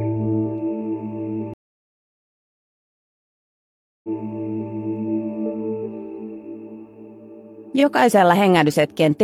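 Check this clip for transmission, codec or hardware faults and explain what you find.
One transmission fault is present: a stream reconnect between 1.54 s and 4.73 s. The audio drops to silence for 2.5 s, then picks up again about 0.7 s behind where it stopped, so that stretch plays twice. The connection broke, the player fell silent while it reconnected, and a fresh decoder started mid-stream. On rejoining, the server resent a burst of recent audio, which sets the restart point earlier than the cut.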